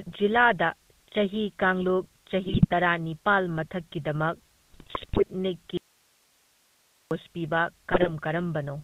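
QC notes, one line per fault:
Throughout, GSM full-rate codec. The speech carries a plainly audible buzzy, gravelly roughness that fits a 13 kbps GSM full-rate stream. The codec rebuilds the voice from a vocal-tract filter fed by evenly spaced pulses. It keeps only a thinned-out excitation, so fine detail turns to grit. Nothing above 4 kHz survives, so the top end is dull and boxed in. Sibilants lose their edge, and brighter parts of the voice suffer most.
2.44 to 2.75 s, 4.70 to 5.23 s and 7.92 to 8.09 s, GSM bit errors. In each of these stretches the speech breaks into squawks, pops and gargling. The second stretch is the longest and the most broken. The sound points to corrupted bits reaching the decoder frame after frame. Wrong filter values warp the spectrum. Wrong pitch values scramble the periodicity. Wrong gain values make the level jump suddenly. The effect stops as soon as clean frames return.
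5.77 to 7.11 s, audio dropout to a faint residue. The speech cuts off abruptly and stays gone for about 1.34 s. It then returns mid-flow. The gap is not silent. It holds only hiss, very roughly 40 dB below the normal speech level. The break is too sudden for a natural pause or a fade. The likely cause is that the wanted signal was lost upstream while the path after the break stayed live. That live path carried its own noise floor through the gap.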